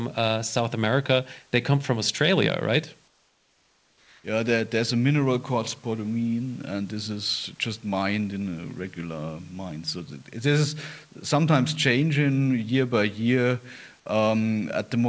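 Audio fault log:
3.08–4.24 s, comfort noise in place of the background: for about 1.16 s the room noise, roughly 36 dB below the speech, gives way to a steady, smoother noise about 4 dB quieter, likely receiver-generated filler during a transmission pause on this G.722 call path.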